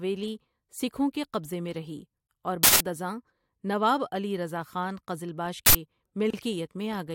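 Speech with two uninitialised-buffer bursts, at 2.63 to 2.80 s (between "قبضہ میں رہی اور" and "ازاں نواب علی رضا") and 5.66 to 5.75 s. Leftover memory played as samples produces loud digital noise, not a brief click or a dropout, lasting 170 ms and 85 ms, which fits 8192- and 4096-sample blocks. At 6.30 s a 32 ms gap at a join of encoded pieces opens. Unlike a dropout, nothing is lost: the silence comes from encoder delay and frame padding left in at the splice, its edges smeared, and the speech resumes exactly where it stopped.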